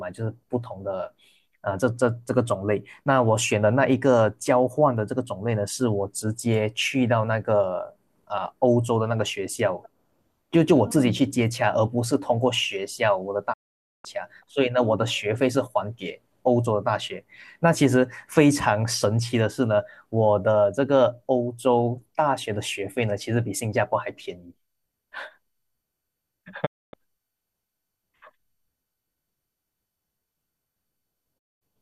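Speech with three digital broadcast dropouts, at 13.52 to 14.06 s, 26.65 to 26.95 s and 31.37 to 31.63 s. Each time the receiver lost valid frames and muted, with a quick 20 ms fade to silence, so about 0.5 s, 0.26 s and 0.22 s of the programme are missing.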